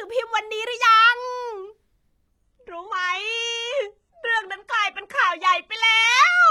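Adaptive stream at a lower bitrate from 2.44 s onward: the speech abruptly gains codec artefacts without a gap, which fits a switch to 16 kbit/s HE-AAC.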